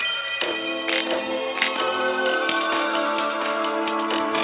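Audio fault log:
No audible faults found.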